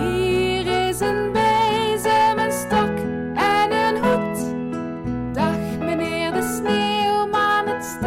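Hard clipping runs through the whole recording. It is driven about 6 dB past full scale, so roughly 3 percent of samples are flattened, adding crackle on peaks.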